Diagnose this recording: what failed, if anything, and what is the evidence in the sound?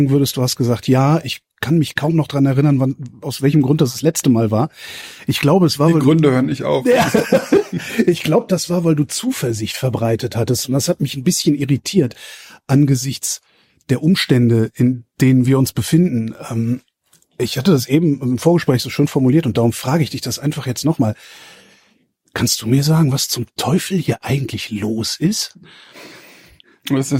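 Clock drift between sender and receiver, at the network jitter buffer: the sender's clock runs roughly one and a half percent slow, so the buffer keeps draining. Unlike packet loss, the disturbance never lets up.

Repeated timing corrections run from 0.10 to 26.93 s: the receiver repeats short pieces, stretching the audio to 98% speed and adding about half a second. The uneven spacing distinguishes this from smooth tape wow.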